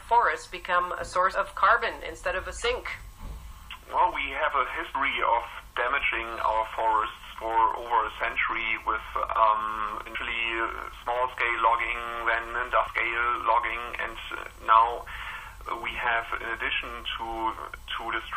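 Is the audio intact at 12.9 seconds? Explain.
No, not quite. At about 12.87 s there's a brief blip from damaged data in the compressed stream. Some of the data there is corrupted, so the decoder misreads that frame, loses sync and has to hunt for the next frame header, leaving a brief glitch.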